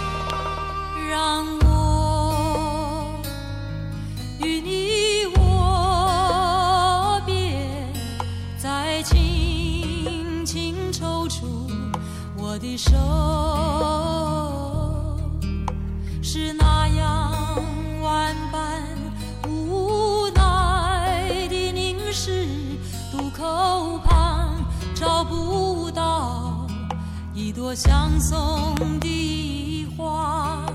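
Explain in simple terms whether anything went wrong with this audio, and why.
Two sharp, sudden bangs jump out above the audio, and the sound keeps going underneath each one. The first is a single loud pop right at the start, from 0.30 to 0.32 s. The second, from 28.77 to 29.04 s, is a double pop, two quick hits in a row and a bit louder. Each loud pop is likely a brief electrical jolt, such as a plug, switch or static discharge, getting into the signal.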